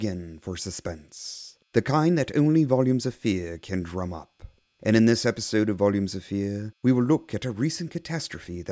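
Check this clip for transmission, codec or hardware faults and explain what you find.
Nothing to flag here: listening through the speech, nothing in the transmission, codec or hardware path stands out as a fault.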